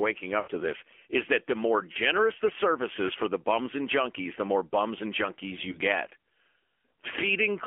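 AMR narrowband mobile codec, present from start to finish: the speech has passed through a 2G/3G-style coder that rebuilds the voice from a vocal tract model and a sparse pulse excitation. The line band runs from 300 Hz to 3.4 kHz, so the sound is thin and muffled. The codec damage is plainly audible as a buzzy, synthetic edge, which fits one of the lower AMR modes, around 7.4 kbps.

Lost AMR speech frames, at 0.40 to 0.51 s, 1.92 to 1.97 s and 5.72 to 5.80 s: frames were corrupted in transmission, and the decoder filled each gap by repeating its last good pitch and vocal tract settings at falling gain. The first, longer loss, just before "to this is that", is heard as a smeared, drawn-out stretch that sags in level. The shorter ones, after "is that the more" and after "more bums and junkies", are heard as brief warbling dips.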